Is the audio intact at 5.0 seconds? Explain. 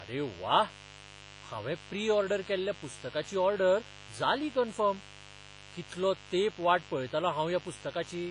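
No. At 5.0 seconds the speech carries a mains buzz that runs through the whole clip: sharp switching spikes at twice the 50 Hz mains rate, with harmonics reaching into the kilohertz range, give a steady, raspy buzz sitting roughly 20 dB below the speech.

The same moment is also heavily smeared, with a ringing, washy quality and a hiss that swells and fades with the speech. Nothing is present above 10.5 kHz. This is likely WMA compression at a low bitrate around 24 kbps, where long transform blocks spread quantisation noise over tens of milliseconds and weak spectral lines are zeroed.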